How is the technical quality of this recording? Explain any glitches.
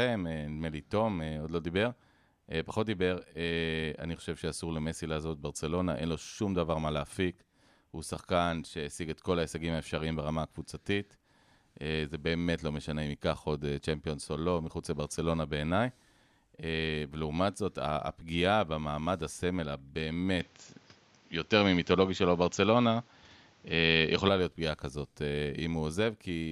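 The recording has one clear fault, a stretch where the speech changes character for a few seconds. From 20.40 s to 24.29 s the speech is band-limited, with nothing above 7.6 kHz, so it turns duller and boxy. The level also shifts by roughly 5 dB, and a new, faint noise floor appears well below the speech. The switch happens without any gap. The likely cause is the input switched to a poorer device mid-recording, such as another microphone or a headset call profile, whose narrower band, different gain and own noise take over until the original input returns.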